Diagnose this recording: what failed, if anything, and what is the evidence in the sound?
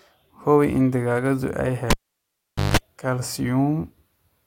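Analogue wiring failed: a cable pulled and plugged in. After "in digaagadu ay", a pop at 1.90 s drops the speech to near silence for 0.82 s. Within that gap come 0.17 s of 50 Hz mains buzz as only the tip touches, and then a second pop at 2.77 s.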